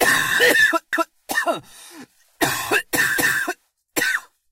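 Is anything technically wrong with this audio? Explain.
Yes. There are overlapping chunks at 0.93 to 1.18 s and again at 3.18 to 3.43 s, exactly 2.25 s apart, matching a 2 s chunk length. Each new chunk begins before the previous one finished, so 250 ms of sound plays twice at each join, heard as a stutter. Unlike a dropout, nothing is missing. The material repeats. The fixed 2.25 s spacing also separates it from a random skip or glitch.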